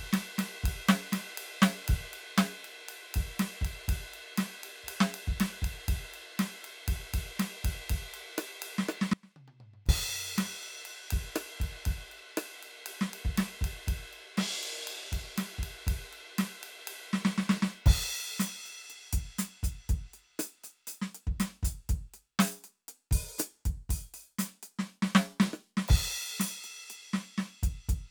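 At 9.14 s the music drops out abruptly for about 0.75 s, returning at 9.89 s. This is an audio dropout to a faint residue: the gap is not silent but keeps faint sound roughly 25 dB down, so the signal path likely stayed live while the main feed was briefly lost. On a waveform the envelope collapses to a narrow band with vertical edges; a spectrogram shows a sharp-sided, faded stripe across all frequencies.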